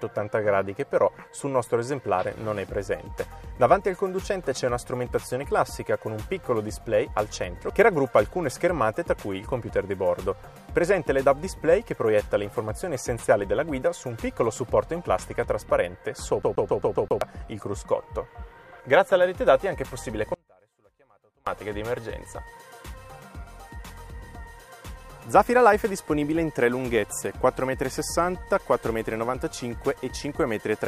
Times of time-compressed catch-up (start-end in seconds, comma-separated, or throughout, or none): none